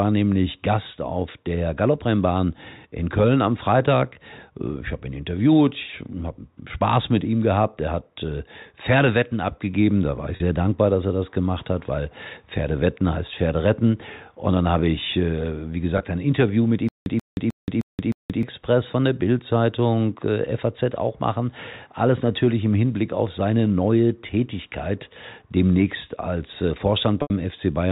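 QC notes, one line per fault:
10.36–10.40, 15.98–16.00, 27.22–27.30: packet loss with pitch repetition. Three dropouts of about 40, 20 and 80 ms, where the receiver bridges the hole by repeating the last pitch period. The two short ones come across as a brief buzzy hold. The 80 ms one at the end is long enough that the held period fades toward silence before the speech cross-fades back in. The gap lengths fit losing two, one and four 20 ms packets.
16.89–18.43: stutter with silent gaps. A 134 ms fragment of speech plays, then about 175 ms of dead digital silence follows, and this repeats five times at a steady 309 ms beat. That's likely a stalled stream where each retry replays the last buffered chunk and then runs dry. Whatever should have played across that stretch is gone. The narrowband telephone sound is consistent with G.711 mu-law at 64 kbps.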